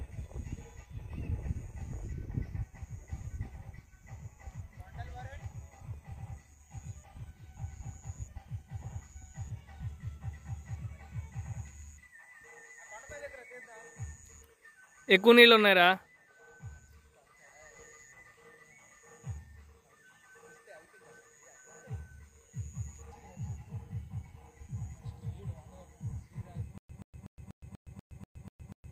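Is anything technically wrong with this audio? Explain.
Yes. A stutter with silent gaps starts at 26.78 s and lasts to the end of the clip. Its likely cause is a stalled player or stream that replayed its last buffered fragment on each retry and then ran dry. The same 126 ms burst comes back nine times at an even 243 ms spacing, with about 117 ms of dead digital silence between repeats. The audio that should have filled that stretch is lost.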